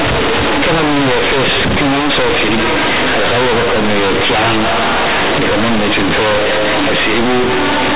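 From start to finish, the speech is companded audio read as linear. The A-law bytes are played as plain 8-bit samples without expansion. Each sign change swings the output across half its range. Quiet and loud parts come out equally large, giving harsh, buzzy distortion and heavy noise in pauses. The underlying G.711 telephone coding runs at 8 kHz and passes nothing above 4 kHz.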